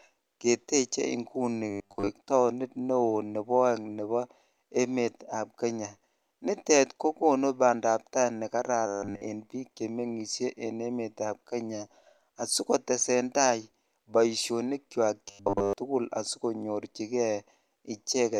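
At 1.70 to 2.10 s, 8.87 to 9.22 s and 15.28 to 15.73 s the speech turns into a robotic sound from repeated short buffers, a rigid 100 Hz metallic buzz, likely from 10 ms chunks of audio being replayed while the incoming audio is skipped. Most of the first two spans and all of the third are repeats. On a spectrogram these spans show flat harmonic lines every 100 Hz; on the waveform they show identical 10 ms cycles.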